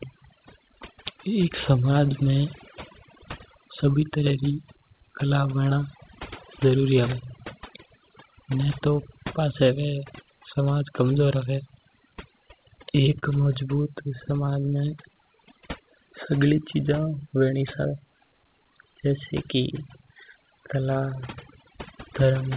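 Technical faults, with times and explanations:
Throughout, overdone noise removal: a noise reduction stage set far too aggressively has pulled individual frequency bands down whenever they sat near its noise estimate, taking quiet parts of the speech with them. The background drops and breaks up into twinkling specks, and the speech sits within a band that stops at 4 kHz, as expected for G.711 A-law.
12.83 to 12.86 s and 13.19 to 13.24 s, short stall from a late packet: a packet arrived late and the jitter buffer ran dry, so the receiver stretched the last sound for about 15 ms, then 35 ms, before resuming. Nothing is lost, but a sound hangs slightly too long.
13.82 to 14.50 s, scattered short gaps: roughly five packets went missing or late across this stretch, each hole no longer than about 15 ms, and the receiver bridged each by carrying the previous sound forward. Clarity holds, but brief ticks and smears break through.
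14.60 to 15.60 s, jitter buffer slow-down: to build up a reserve, the buffer repeated pitch periods and slivers of pauses to add 72 ms over this second. The speech plays at about 93% speed at unchanged pitch, sounding drawn out.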